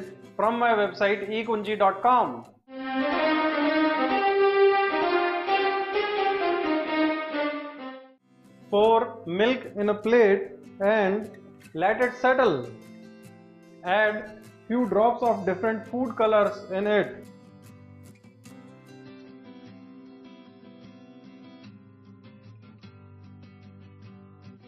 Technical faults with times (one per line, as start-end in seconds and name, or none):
19.04-24.67 adaptive stream at a lower bitrate